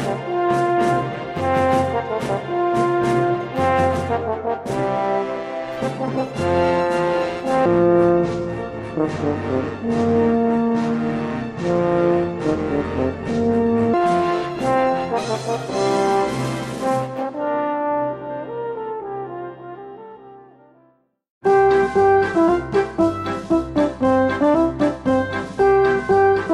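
From 7.66 s to 13.94 s the sound suddenly drops deep and drags, running at 0.661 times its proper speed, so everything sits roughly seven semitones low and moves sluggishly, with pitch and pace shifting together the instant the section begins and snapping back when it ends. This is a section at the wrong speed, likely from an editor or player handling that stretch against a mismatched clock.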